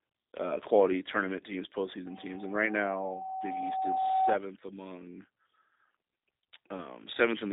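The whole clip carries the G.729 codec sound, plainly audible throughout, consistent with an 8 kbit/s G.729 link. The voice is rebuilt from a vocal tract model plus a few pulses per frame, so it comes across rough and synthetic, and nothing above 4 kHz survives.

Right after "uh quality tournament teams", at about 2.06 s, a loudspeaker feedback squeal kicks in. The mic is catching its own speaker, and the loop runs away at a 760 Hz tone. It swells over roughly two seconds to about 10 dB above the speech, then stops at 4.38 s.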